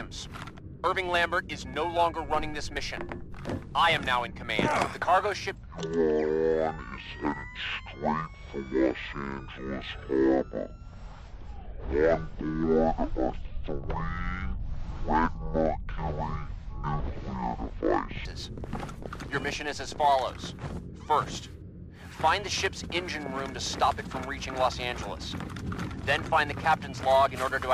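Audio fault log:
5.55–18.25 s, section at the wrong speed: sound turns deep and sluggish at half speed, pitch dropping about ten semitones, likely from playback against the wrong clock.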